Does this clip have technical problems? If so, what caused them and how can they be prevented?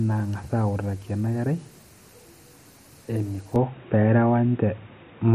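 Yes. At 3.56 s the speech abruptly turns dull and boxy, with no gap: nothing remains above 3.8 kHz, the level shifts by roughly 5 dB, and a faint new noise floor appears. This is likely an input switched to a poorer device, such as a narrowband headset profile. Prevent it by locking the recording input so the system cannot reassign it automatically mid-session.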